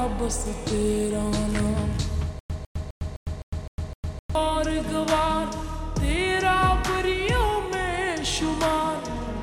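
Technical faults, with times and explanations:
2.39–4.35 s, stutter with silent gaps: the same short fragment, about 151 ms long, comes back seven times at a steady pace of roughly one every 257 ms, with about 106 ms of dead digital silence after each. That pattern is the likely sign of a player or stream stalling: each retry replays the last chunk it had, then runs dry. Whatever sound belonged in those two seconds never makes it out.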